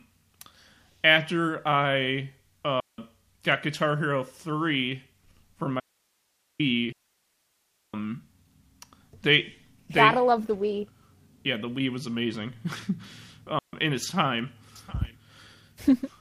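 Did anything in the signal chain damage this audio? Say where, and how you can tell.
Yes. The speech has three digital wireless dropouts: 2.80 to 2.98 s, 6.92 to 7.94 s, and 13.59 to 13.73 s. Each is a clean hole of near silence with no noise burst on either side. The receiver lost too much data and muted.

There is also an audio dropout to a faint residue from 5.80 to 6.59 s. The speech stops abruptly, and only hiss remains, about 45 dB below the signal. The path after the break stayed live. A failing analogue connection is the likely cause.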